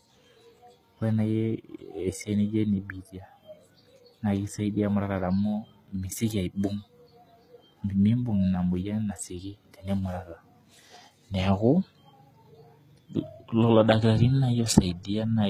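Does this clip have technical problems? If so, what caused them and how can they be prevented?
Yes. Throughout the speech the upper frequencies sound bright yet synthetic: s sounds come out gritty and lispy, with a metallic sheen, and the damage is plainly audible. This is likely HE-AAC compression at a low bitrate, which fits roughly 20 kbps. The codec encodes only the lower band properly and fills in the treble by copying lower-frequency content upward under a coarse envelope, so the rebuilt highs no longer match the real harmonics above the crossover. To prevent it, encode at a higher bitrate with plain AAC-LC or Opus instead of relying on band replication.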